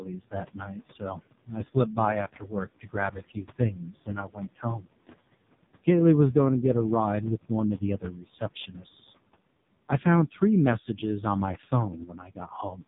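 Throughout, the speech carries noise suppressor artifacts. Room noise, about 18 dB below the speech, is pushed down by about 21 dB in the pauses. It swells back under each phrase.

The whole clip also passes through an AMR narrowband mobile codec. Nothing above 3.8 kHz survives, so the voice sounds boxed in. The damage is heavy. The voice turns buzzy and synthetic, which fits a low AMR-NB mode near 5 kbps.

Speech cut by the noise suppressor recurs. Parts of the speech are mistaken for noise and turned down by up to about 21 dB, leaving them faint or swallowed. It happens at 0.00 to 1.21 s, 1.46 to 1.57 s and 2.36 to 4.87 s. It happens again at 8.00 to 8.85 s after "of the", and at 10.31 to 10.42 s between "I found" and "messages on my". The last cut is at 12.05 to 12.82 s after "messages on my". The longest cut, from 2.36 s, loses about a second in all.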